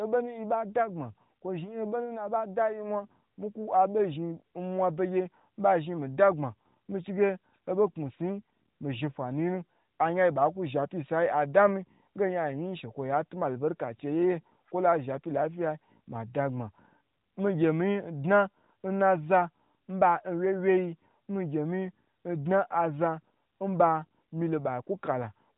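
No technical faults can be heard in this speech; it has the narrow, band-limited sound of an AMR narrowband mobile codec at 12.2 kbps, with nothing above about 3.8 kHz and only light coding colouration.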